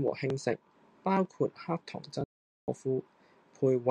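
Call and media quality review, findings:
Audio dropout to silence, 2.24 to 2.68 s. Speech cuts off abruptly, then resumes mid-flow after about 440 ms of digital silence with no room tone. Likely input loss upstream, such as a device disconnect, a link failure or a stray mute, while the encoder kept writing silence. Content in the gap is lost.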